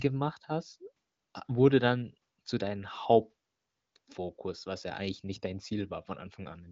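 No faults are audible in this speech; the audio is band-limited to about 7.6 kHz, consistent with a high-rate AMR wideband (HD Voice) codec.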